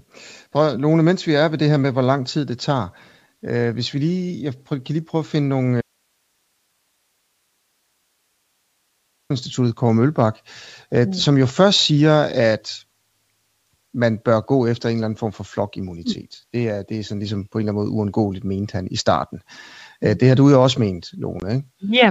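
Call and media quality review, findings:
Audio dropout to a faint residue, 5.81–9.30 s: speech cuts out abruptly for about 3.5 s and leaves only hiss about 50 dB below signal. Path stayed live, so likely an upstream capture or transport interruption, not muting.

Packet loss on an ADPCM call, 21.40–21.43 s, right after "du jo også ment": hard-edged 20 ms hole, which fits a single lost packet. The G.722 decoder's predictor and step size desynchronise, so the speech that follows carries brief distortion.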